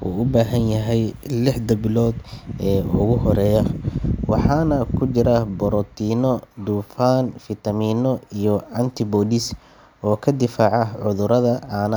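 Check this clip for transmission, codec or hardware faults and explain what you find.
Nothing stood out on listening to the speech here; no transmission, codec or hardware problem could be heard anywhere in the recording.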